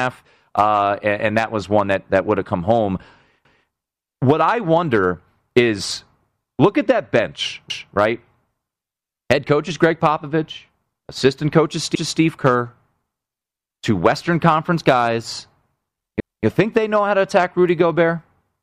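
Overlapping chunks stutter the speech at 3.45, 7.70, 11.95 and 16.20 s. Each 4 s chunk starts 250 ms early, so that slice replays.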